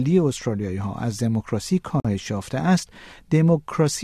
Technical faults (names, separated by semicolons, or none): gap at a join of encoded pieces